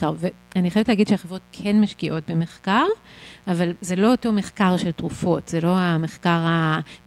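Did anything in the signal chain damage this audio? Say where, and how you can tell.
Yes, there's mains buzz under the speech from start to finish, sitting well down, around 35 dB below it. It's a raspy 60 Hz buzz, so it came in on the analogue wiring: switching spikes from a dimmer, rectifier or a missing shield, twice per cycle, spraying harmonics into the kilohertz range.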